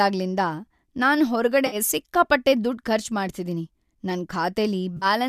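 At 1.67 to 1.76 s and again at 4.97 to 5.06 s, the speech breaks into a brief smeared, noisy patch, AAC frame loss with concealment. About 50 ms went missing each time, consistent with five short low-delay AAC frames, likely from the AAC-ELD path, and the decoder filled the gap from the last good spectrum. On a spectrogram each gap shows blurred energy, and the waveform loses its periodic shape.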